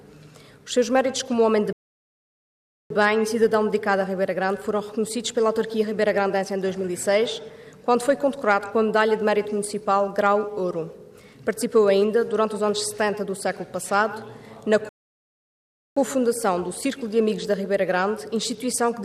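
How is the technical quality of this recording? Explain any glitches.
Two rebuffering stalls interrupt playback, at 1.73 to 2.90 s and 14.89 to 15.97 s, adding about 1.18 s and 1.07 s. The player's buffer ran dry, so sound drops to silence, then resumes exactly where it stopped, losing nothing but adding time.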